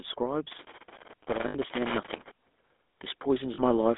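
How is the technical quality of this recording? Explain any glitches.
The recording is poor, with audible damage throughout and several distinct glitches.

GSM full-rate codec: For the whole clip, the speech passes through the original GSM full-rate coder, which models the vocal tract and drives it with a coarse pulse excitation. The band is squeezed to roughly 250 Hz to 3.6 kHz, and the voice carries that plainly audible buzzy, gravelly roughness, consistent with a 13 kbps GSM channel.

Loose connector crackle: From 0.51 to 2.31 s, a worn or dirty contact keeps making and breaking as it shifts. The signal is chopped on and off, with pops where any DC steps across the gap, so an irregular scratchy crackle rides over the speech for nearly two seconds.

Lost GSM frames: At 1.48 to 1.55 s (60 ms) and 3.54 to 3.60 s (40 ms), the decoder received bad frames and filled them by repeating the last good frame's parameters. 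Each gap becomes a brief, rough, metallic ring rather than a clean dropout. The first gap falls inside the crackle.

Automatic gain rising: From 3.24 to 3.95 s, the automatic gain control judged the input too quiet and raised its gain by about 4 dB. Voice and background swell upward together over those last three-quarters of a second, and the second frame loss occurs during the rise.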